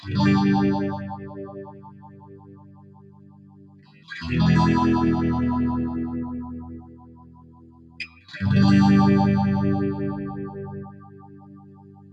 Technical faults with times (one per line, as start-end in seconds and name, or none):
0.00-12.13 noise suppressor applied to music or sounds
1.16-4.08 sound cut by the noise suppressor
6.80-8.28 sound cut by the noise suppressor
10.89-12.13 sound cut by the noise suppressor